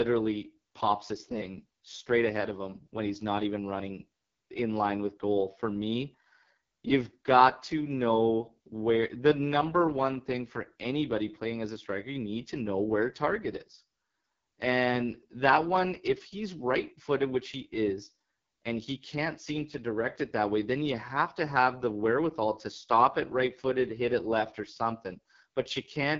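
From start to finish the speech has been squeezed through the AMR wideband (HD Voice) codec at one of its lowest settings, a heavily damaged result that fits a bitrate near 6.6 kbit/s. At that rate the pulse-driven vocal tract model gets too few bits to follow the voice, so it comes out rough and raspy. The band is cut off with nothing above 7.5 kHz, and the top edge is only synthetic shaped noise.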